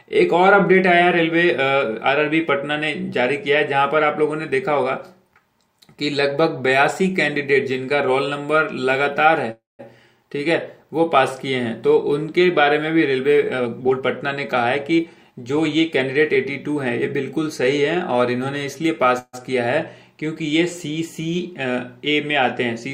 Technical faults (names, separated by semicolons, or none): call audio freeze; jitter buffer speed-up